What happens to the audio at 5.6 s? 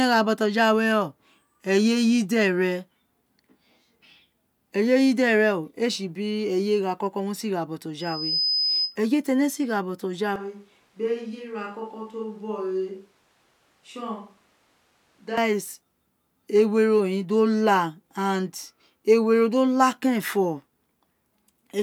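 Nothing goes wrong at 5.6 s; the speech there is intact, with no dropout, click, distortion or other fault to be heard.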